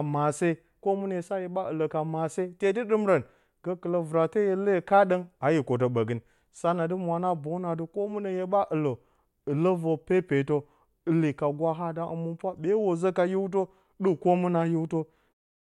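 No technical faults can be heard anywhere in this recording.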